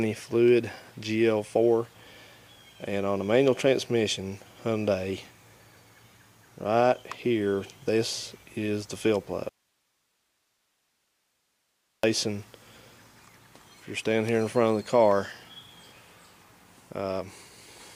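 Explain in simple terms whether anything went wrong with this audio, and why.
An audio dropout to a faint residue happens from 9.49 to 12.03 s. For about two and a half seconds the sound cuts out abruptly, and only a quiet hiss remains, far softer than the normal level. It then snaps back in the middle of the flow. The likely cause is that the wanted signal was briefly lost while the recording path after the break stayed switched on. That path kept passing its own background noise, which is why the gap holds hiss rather than true silence.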